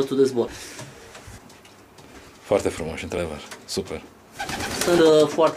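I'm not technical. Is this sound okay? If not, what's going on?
No. The sound jumps ahead at 0.48, 3.18 and 4.98 s, each skip losing about a tenth of a second, likely audio missing between chunks of one second.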